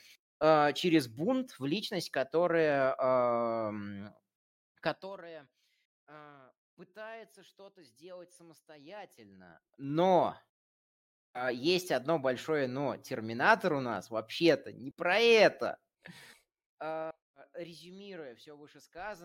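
Ticking zipper noise rides on the speech at 4.82 to 5.24 s, 9.12 to 9.95 s, and 15.66 to 17.12 s after "не про". Each level move of about 20 dB proceeds in unsmoothed 2 dB steps, roughly forty, twenty, then ten per second.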